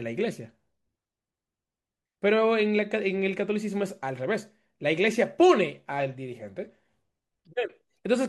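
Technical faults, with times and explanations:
Nothing wrong here to flag, the speech just runs along without any technical trouble worth a mention.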